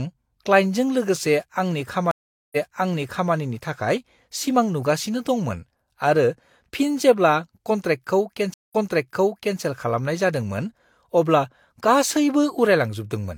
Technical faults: stream reconnect

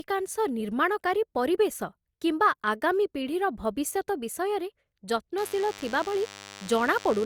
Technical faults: DECT cordless phone buzz

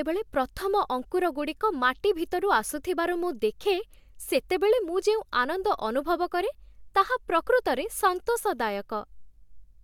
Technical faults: none

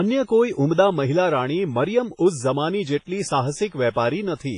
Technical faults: WMA compression

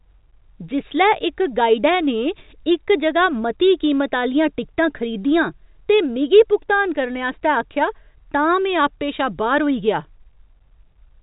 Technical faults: none

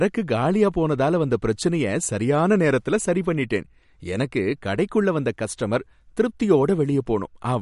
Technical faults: MP3 compression

